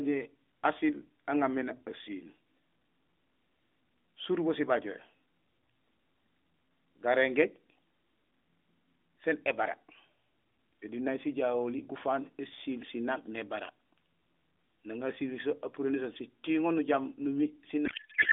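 From 17.86 s to the end at 18.32 s, the speech turns into garbled noise and warble that barely tracks it. This is a codec payload misread: AMR frames packed octet-aligned were unpacked as bandwidth-efficient, so the decoder placed every field wrongly.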